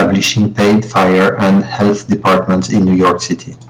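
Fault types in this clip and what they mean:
Microphone overload, 0.00 to 3.32 s: The speech is clipped throughout this stretch, with the loudest moments pushed roughly 16 dB past full scale and something like a sixth of the samples flattened at the ceiling. The likely cause is a microphone input set far too hot, so the converter runs out of headroom and slices off waveform tops. That flattening generates added harmonics, giving the louder syllables a harsh, crackling, gritty edge rather than clean peaks.
Microphone volume stepped down, at 3.02 s: The level of both speech and background drops abruptly by about 2 dB in a single step, near the end of the distorted stretch. This is likely automatic gain control in the call software reacting to the sustained clipping and lowering the device's input volume. The cut is small, so the clipping carries on until 3.32 s, but the loudness shifts in a discrete step.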